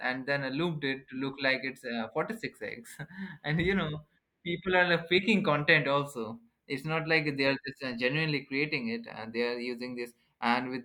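No technical faults are audible anywhere in this recording.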